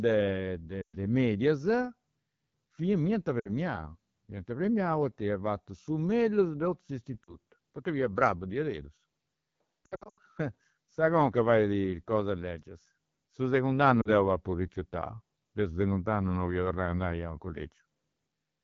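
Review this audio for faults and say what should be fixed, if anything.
The AMR wideband (HD Voice) codec runs throughout at 8.85 kbit/s, near its lowest rate. The speech model is starved of bits, so the speech sounds plainly rough and raspy.

Lost AMR speech frames cause dropouts at 0.81–0.97 s, 3.40–3.50 s, 7.23–7.35 s (before "poita fia bravu"), 9.85–10.19 s and 14.01–14.09 s (before "deu apu rifiutau deu"). The decoder repeated its last pitch and vocal-tract settings with fading gain, which produces smeared dips. The 9.85 s event is scattered across about 320 ms, with runs up to 80 ms.

To prevent this, carry the call at 12.65 kbit/s or higher and improve radio link quality or error protection so frames pass their checksum.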